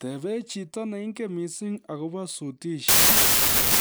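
From 2.88 s to the end, the speech collapses into loud broadband noise: a wrong sample width fault. Samples written as packed 24-bit integers are being read as 32-bit ones, so each value straddles byte boundaries and only fragments keep the true top bits. The buried speech runs 1.33 times fast and pitched up. On a waveform the section swells into a dense, loud block; a spectrogram shows a dense noise wash with faint, stretched harmonics underneath.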